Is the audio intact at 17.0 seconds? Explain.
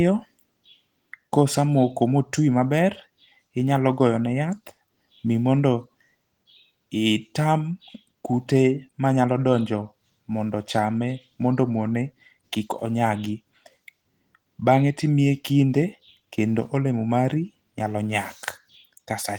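Yes, the audio is intact at 17.0 seconds, with the Opus voice compression running normally and nothing breaking the sound at that point.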